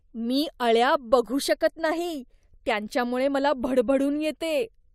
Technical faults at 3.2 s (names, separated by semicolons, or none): none